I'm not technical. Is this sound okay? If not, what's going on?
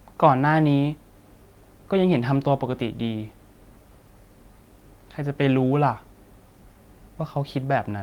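Yes, this recording sounds fine. Nothing in it points to a technical problem.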